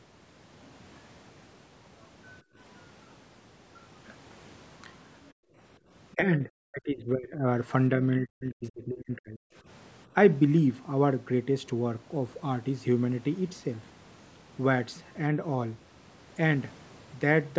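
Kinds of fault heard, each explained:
Background gated by the echo canceller: while the far end played through the loudspeaker, the canceller pulled the microphone down hard, so the room sound drops out briefly, about 23 dB at 2.42 s and about 36 dB around 5.33 to 5.56 s, then returns.
Speech suppressed in double talk: with both sides talking at once, the talker's speech dips in pieces from 6.15 to 7.46 s, roughly 20 dB down, and from 8.19 to 9.42 s, as much as 40 dB. The likely cause is the canceller confusing the talker with loudspeaker echo.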